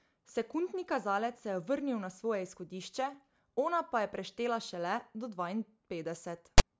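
A harsh, loud rasp with hard edges cuts in from 6.58 to 6.60 s, lopsided toward one side: file tags played as audio, text metadata decoded as sample values.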